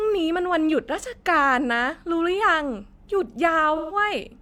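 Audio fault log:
3.76–3.96 s, AAC frame loss with concealment: a brief smeared, noisy patch in the speech covering about 128 ms of missing audio, which fits three lost frames. The decoder bridges the gap by reusing the last good spectrum with jumbled phase, so it smears.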